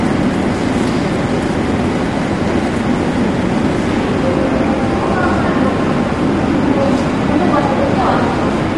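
Throughout, grainy noise fills gaps between tonal components, unlike a clean low-pass, and nothing remains above 11.5 kHz: likely low-delay AAC compression at low bitrate.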